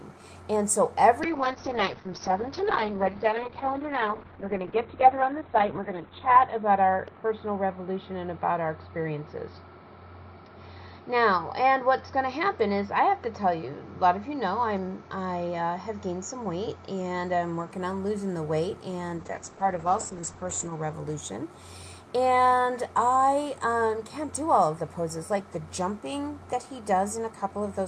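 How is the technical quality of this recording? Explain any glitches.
The technical quality is degraded by two call bitrate drops, 1.24–17.77 s and 19.19–20.99 s. The call's bandwidth estimate fell, so the encoder coded coarsely and removed content above 4 kHz, then 8 kHz. The audio turns rough and muffled, and a spectrogram shows a flat ceiling at those frequencies.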